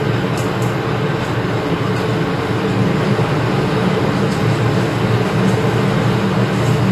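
Throughout, the sound is dull, with nothing above 13.5 kHz and a warbling, smeared texture. Likely AAC compression at a low bitrate, around 32 kbps.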